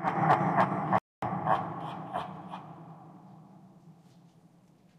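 A recording of sounds with a playback stall from 0.98 to 1.22 s: the output goes silent for about 240 ms, likely because the player ran short of data or its thread was blocked. Unlike a brief dropout or click, this is a sustained mid-flow silence.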